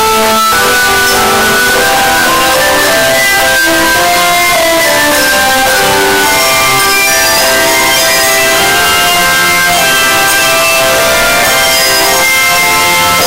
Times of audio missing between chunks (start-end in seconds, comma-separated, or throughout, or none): none